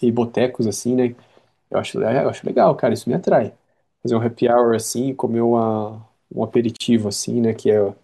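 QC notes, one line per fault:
6.77–6.80 s, gap at a join of encoded pieces: the speech breaks off in a 39 ms gap and then picks up exactly where it left off, with nothing skipped or repeated. Two separately encoded pieces were joined untrimmed, so the first piece's padded last frame and the second's start-up delay both sit at the seam as silence. Unlike a packet-loss dropout, no sound is missing. A pause is inserted, with edges smeared by the codec.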